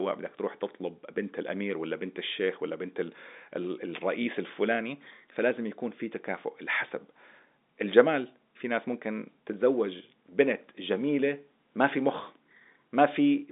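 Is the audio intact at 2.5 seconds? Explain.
Yes, the audio is intact at 2.5 seconds, with nothing at that moment beyond the narrow telephone band of G.711 coding, which cuts off everything above about 3.8 kHz.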